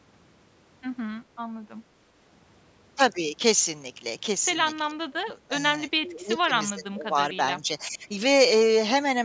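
Speech, with the talker's level sagging in four stretches: 4.88 to 5.63 s, 6.01 to 6.51 s, 6.71 to 7.18 s and 7.61 to 8.05 s. The first dip is the deepest, around 20 dB, and the later ones ease off to roughly 15 and then 10 dB. That pattern is likely speech suppressed in double talk, where the echo canceller loses track of who's talking over whom and pulls everything down. The band tops out at 8 kHz, as call microphone processing would give.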